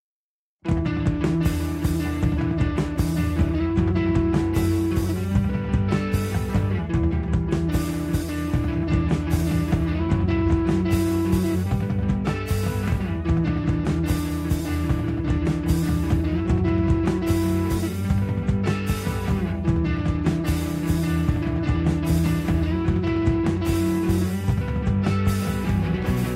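No technical faults can be heard anywhere in this audio. Nothing in the signal breaks, stalls or shifts at any point.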